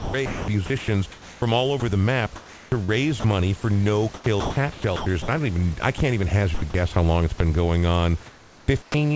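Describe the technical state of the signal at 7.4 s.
At 7.38 to 7.40 s, just after "how long it's", the speech briefly gives way to a 20 ms patch of steady, featureless noise before the signal resumes. About 10 ms of actual speech is lost. This is likely sound dropped by the voice detector: the sender judged the sound there to be background and stopped transmitting, and the receiver filled the gap with comfort noise. The fill sits against room noise about 25 dB below the speech.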